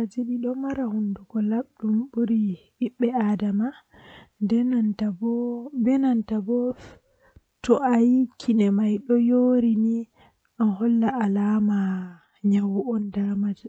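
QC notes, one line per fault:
No faults heard anywhere in this speech clip.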